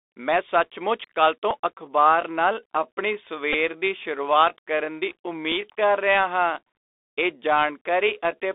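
Throughout the speech, the Bluetooth CVSD headset codec limits the band to roughly 300 Hz to 3.6 kHz, which fits a 64 kbps CVSD link. CVSD encodes each sample as a single up-or-down bit with an adapting step size. Fast, loud high-frequency content outruns the step, so sibilants turn scratchy and a granular hiss sits under the speech. The damage is plainly audible across the whole clip.

At 1.51 s a Bluetooth headset packet repeated event gives a brief tick. Its length, about 3.8 ms, fits a single lost packet that the chip filled by decoding the previous packet's bits again.

From 1.71 s onward the pace drops abruptly to about 0.74 times normal speed while the pitch stays put. This is likely a time-stretched section, where software lengthened the audio by repeating short pieces so the pitch would not fall.

At 3.53 to 3.55 s a longer packet repeat lasts about 11.2 ms, which suggests roughly three consecutive packets were replaced. 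Because the same bits are replayed every 3.75 ms, this run produces a short buzz near 267 Hz instead of a single tick.

At 5.52 s another single packet repeat, about 3.8 ms long, produces a small tick.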